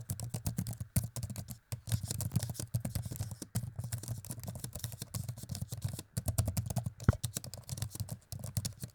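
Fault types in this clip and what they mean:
Chunks out of order: at 2.30 to 2.34 s, a 20 ms chunk plays one chunk late, swapping positions and leaving hard joins heard as a brief jumbled moment.
Video or display buzz: from 5.91 s to the end, a display cable couples into the audio, adding a 75 Hz field-rate buzz with hash, about 35 dB below the signal.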